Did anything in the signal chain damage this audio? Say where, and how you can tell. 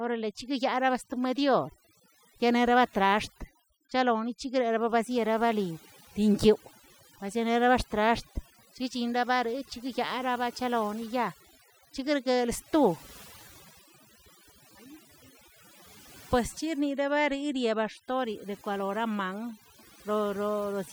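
Yes. Across the whole clip the gaps between phrases drop to near silence dotted with twinkling, chirpy specks. That points to overdone noise removal at the processing stage, where a noise reduction tool was set far too strong on a noisy recording. It cuts each frequency band hard whenever that band sits near its noise estimate, so random residue flickers in the background and the quieter parts of the speech get stripped away too.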